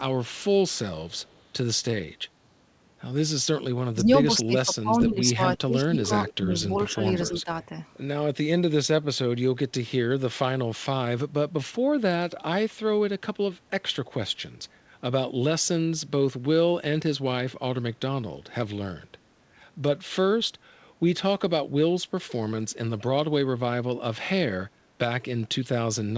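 Speech, carried over a call path whose audio stops at 8 kHz, consistent with a wideband codec such as G.722. An echo leak is heard at 1.11–1.42 s, 5.00–5.06 s, 6.26–6.33 s and 7.26–7.43 s. Each is a copy of the far-end speech arriving 240 ms late. The first is very faint. The later ones are much louder, about 10 to 20 dB below the speech. The likely cause is a loudspeaker echo canceller letting residual echo through. Between 3.93 and 7.77 s, the talker's speech is suppressed during double talk. It dips by up to about 20 dB, across roughly two seconds in all, while the other side is also speaking. The echo canceller likely could not separate the two and turned both down.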